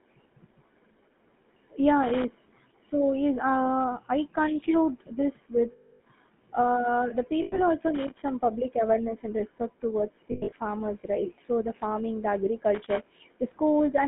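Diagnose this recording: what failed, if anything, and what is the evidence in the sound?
The codec stage failed throughout. The speech has the gravelly, buzzy roughness of the GSM full-rate codec, and nothing lies outside roughly 150 Hz to 3.5 kHz. That fits the 13 kbps full-rate coder. It rebuilds the voice from a vocal-tract model driven by sparse, regularly spaced pulses.

Analogue wiring failed three times. Irregular bursts of loose connector crackle occur at 2.03 to 2.25 s, 7.95 to 8.28 s and 12.75 to 13.05 s. A worn or dirty contact is making and breaking. That chops the signal.

The radio link or network lost frames. Lost GSM frames are heard at 5.72 to 6.01 s (280 ms), at 7.42 to 7.59 s (100 ms), and scattered over 10.32 to 10.53 s, with the longest gap about a tenth of a second. In each gap the last good frame repeats, holding the sound as a metallic ring.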